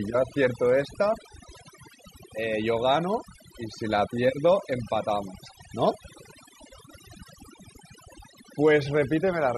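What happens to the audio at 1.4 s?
At 1.4 s the speech is under overdone noise removal, which runs through the whole clip. The reducer is set too hard. Bands near its noise estimate are cut deep or dropped. Quiet parts of the voice vanish with them. The background drops and breaks up into twinkling specks.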